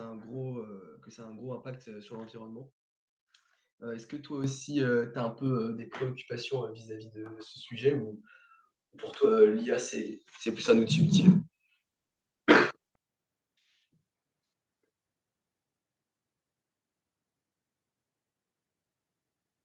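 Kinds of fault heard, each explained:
Microphone volume stepped up: input gain jumps at 4.44, 5.46 and 7.26 s, by about 8, 3 and 5 dB, lifting speech and background together as waveform steps.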